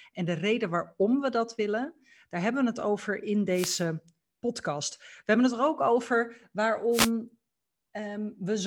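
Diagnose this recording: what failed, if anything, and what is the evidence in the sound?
Two brief swishes of static occur in the speech at 3.52–3.85 s and 6.91–7.11 s: wireless microphone noise hits, where the analogue FM radio link fades under cancelling reflections and receiver noise surges.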